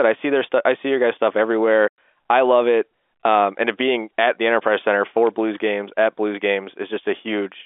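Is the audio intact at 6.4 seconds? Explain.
Yes, the speech at 6.4 seconds is intact, carried cleanly through the G.711 telephone coding with its usual narrow telephone band.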